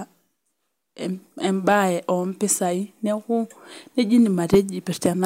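A harsh, crackling fuzz rides on the loudest speech from 4.19 to 4.59 s: hard clipping, with the signal driven about 6 dB past what a stage could pass, flattening its peaks.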